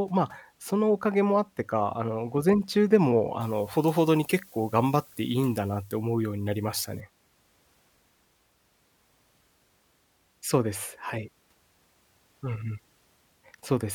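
A speech clip in which, from 3.41 to 7.0 s, pre-emphasis was left on: a 75 µs FM treble boost reached the output without its matching de-emphasis, lifting 10 kHz about 14 dB above 1 kHz, so the voice turns thin, bright and sharply sibilant.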